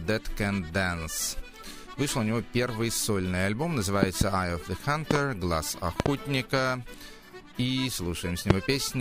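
Loud pops break into the audio. Double pops strike at 4.03–4.24 s, 5.11–5.18 s and 6.00–6.08 s, and a single pop at 8.50–8.53 s. Each peaks about 20 to 25 dB above the sound, which continues underneath. Sudden voltage spikes from a plug, switch or static are the likely cause.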